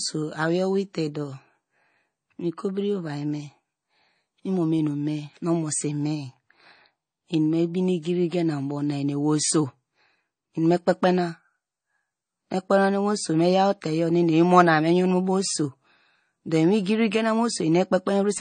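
A watery, swirly quality runs through the whole speech clip, with treble gone above 9 kHz. Likely MP3 compression at a low bitrate, roughly 32 kbps.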